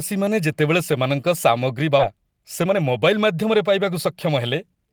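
At 1.99 s, just after "ଯେତେବେଳେ ସେମାନଙ୍କ ସାମଗ୍ରୀ", there is a skip ahead. Around 0.7 s of speech was discarded while later audio was already queued, so playback jumps straight on with no silence or filler. This differs from a dropout, which would leave an audible gap.

From 2.09 s to 4.76 s a jitter buffer speed-up follows. The receiver trimmed short pitch-period slices over and over to shed the built-up backlog, roughly 0.3 s in total. Speech runs at 109% and sounds hurried, yet the pitch stays put, unlike a resampling error.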